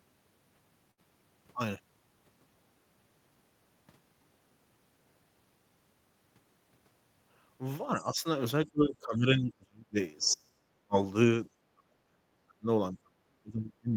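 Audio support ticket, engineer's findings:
Burst of packet loss at 0.91 to 1.00 s. Short held tail, then a jump forward. The receiver's concealment held the last sound for about 59 ms and faded it. About 60 ms of real audio never arrived and is skipped.

Speech suppressed in double talk. Talker level dips at 7.95 to 8.25 s by only about 5 dB, then much deeper: 8.66 to 9.97 s by about 30 dB, 10.20 to 10.96 s by about 40 dB, and 11.70 to 12.67 s and 12.92 s to the end by about 35 dB. Likely cause: echo canceller ducking during overlap.

Other side's voice leaking through at 8.00 to 8.04 s. Faint 40 ms scrap of a second voice, about 25 dB under the talker, inside the first dip. Likely cause: loudspeaker echo not fully cancelled at the microphone.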